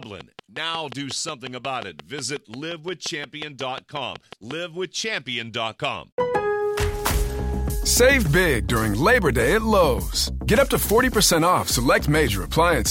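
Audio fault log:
0.03–4.52 s, train of clicks: a regular ticking at about 5.6 clicks per second, some thirty near-identical pulses standing roughly 10 dB above the surrounding sound and audible through quieter moments too, likely from electrical interference or a faulty connection or power supply injecting the same short pulse repeatedly. On a spectrogram each click is a thin broadband vertical line, evenly spaced; on the waveform, narrow spikes jut well above the sound, stopping after 4.5 s.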